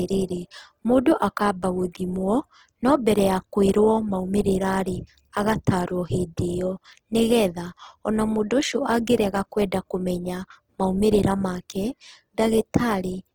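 Across the whole recording the speech carries plainly audible roughness, most likely from Opus compression in its CELT music mode, with the grainy texture pointing to a low bitrate around 16 kbps. Starved of bits, the encoder preserves each band's energy but fills the detail with folded or noise-like content, so voiced sounds turn rough and gritty rather than swirly. A spectrogram shows fullband energy up to about 20.2 kHz with few gaps, though harmonics look smeared and speckled with noise.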